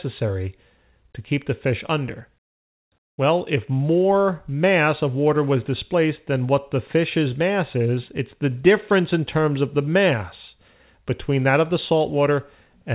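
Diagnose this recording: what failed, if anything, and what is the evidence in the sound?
Nothing failed here; the audio simply has the narrowband character of a G.711 mu-law call path at 64 kbps, with nothing above 4 kHz, which is exactly how that codec is supposed to sound.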